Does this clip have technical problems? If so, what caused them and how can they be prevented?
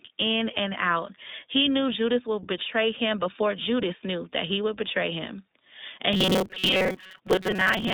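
Yes. The iLBC codec runs throughout: nothing above 3.7 kHz survives, and the speech sounds slightly rough and synthetic, with damage that fits 20 ms frames at about 15 kbps. Unlike a robotic fault, this roughness never imposes a fixed pitch. Sending the speech through a wideband codec would prevent this.

From 6.13 s to the end, there is robotic sound from repeated short buffers. A rigid metallic buzz at 188 Hz points to repeated segments of about 5.3 ms, with roughly half the audio repeated. It is likely caused by audio arriving too seldom. That fixed tone sets it apart from codec roughness. A larger jitter buffer or steadier audio delivery would prevent it.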